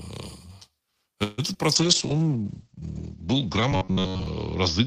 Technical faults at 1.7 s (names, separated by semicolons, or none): short concealed packet loss; call bitrate drop